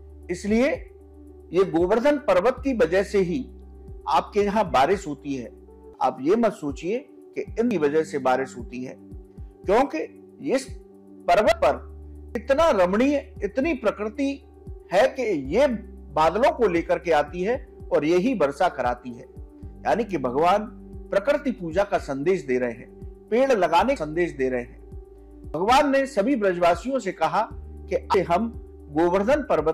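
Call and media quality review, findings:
Six abrupt skips at 7.71, 11.52, 12.35, 23.96, 25.54 and 28.14 s: sound jumping forward, no gap of silence. Roughly 0.1 to 0.3 s lost per skip, longest near the end. Likely dropped buffer (overrun) in the capture path: input not read before hardware overwrote it, remaining audio spliced directly together. Waveform: hard discontinuity. Spectrogram: thin full-band vertical line, content shifting abruptly across it.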